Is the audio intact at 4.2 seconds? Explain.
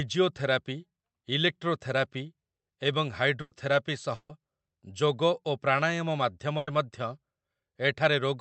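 No. A burst of packet loss runs from 4.15 to 4.31 s: concealment stretches the last sound and fades it for 140 ms, then 20 ms of silence, and 140 ms of speech is skipped, unlike a simple dropout.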